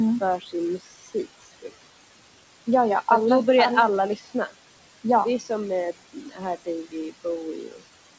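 Noise suppressor artifacts run through the whole clip. The suppressor pulls the steady room noise down by about 21 dB, frame by frame, so the background drops between phrases and swells back under them. This differs from a fixed noise gate, which simply opens and shuts.

Speech cut by the noise suppressor comes at 0.39 to 0.54 s, 0.78 to 1.7 s, 4.16 to 4.53 s, 5.39 to 5.51 s, 6.13 to 6.68 s, 6.84 to 7.26 s and 7.54 to 7.82 s. Here the suppressor mistakes soft speech for noise and turns it down with the background, by up to about 20 dB. The worst cut is at 0.78 s and removes around half a second of speech. Syllables sound swallowed or faint rather than cut off cleanly, which separates this from dropouts or packet loss. The G.722 call path, which stops at 8 kHz, accounts for the dull top end.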